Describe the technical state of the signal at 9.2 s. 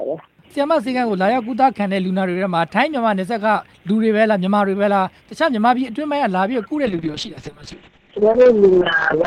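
At 9.2 s the signal is inside a call bitrate drop that began at 6.87 s and runs to the end of the clip. The encoder was pushed down to a starved rate, which fits a fall from around 48 kbps to about 7 kbps. It codes coarsely and cuts the top end off at 8 kHz, so the sound is rough, watery or muffled.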